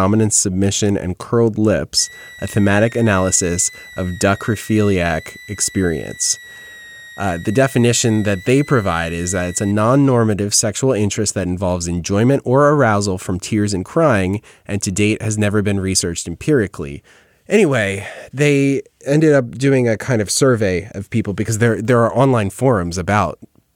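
From 1.99 s to 9.72 s, just before "normative sexual interest that", a switching supply whistle sits about 20 dB under the speech: a high tone near 2 kHz, wandering between 1.85 and 2.01 kHz as the supply's load shifts, showing on a spectrogram as a thin, wavering horizontal line.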